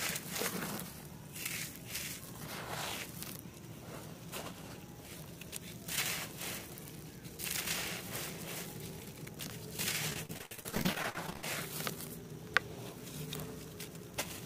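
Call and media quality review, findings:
Repeated packet loss (robotic sound), 10.10 to 11.44 s: choppy stutter, roughly 40% concealed, holes up to 70 ms. Jitter buffer/PLC repeating last frame across about 28 losses. Spectrogram: smeared, repeated harmonic blocks; waveform: periodic looped chunks with breaks.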